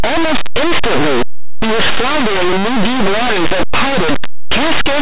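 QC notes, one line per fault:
Throughout: linear audio read as companded. Plain linear 8-bit samples are decoded as mu-law codes, so small values just one side of zero expand to the largest outputs while the other side stays small, giving very loud, harsh distortion.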